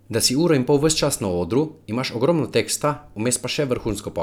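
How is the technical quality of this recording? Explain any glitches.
No audible glitches or faults.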